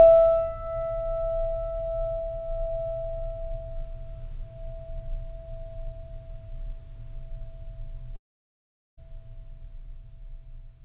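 At 8.16 s the music gives way to a buzzy smear of its last sound that fades out, leaving silence or a faint steady noise until the music picks up again at about 8.99 s with roughly 0.8 s of it gone. This is likely a long network dropout: packets stopped arriving, the receiver stretched the final audio to hide the gap, and when that ran out it had nothing to play. The music throughout stops at 4 kHz, which fits a narrowband G.711 call codec.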